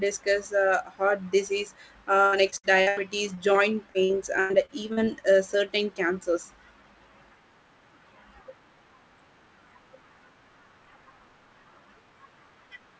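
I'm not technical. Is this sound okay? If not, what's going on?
No. Repeated packet loss (robotic sound) occurs at 2.26–2.99 s and 3.35–5.09 s: bits of speech vanish, each gap under 0.1 s, patched with leftover sound, so it turns choppy.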